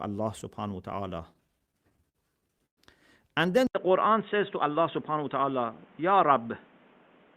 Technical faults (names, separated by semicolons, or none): repeated stalls (stutter); input switched to a poorer device; jitter buffer speed-up